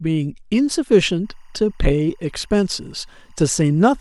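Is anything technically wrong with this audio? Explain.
Yes. From 1.25 s to the end, a faint, steady chirping warble sits behind the speech, flipping between pitches near 1 and 2 kHz about 40 dB down. This is timecode bleed: square-wave linear timecode, fitting a 24-frame rate, leaking in from an adjacent track or cable.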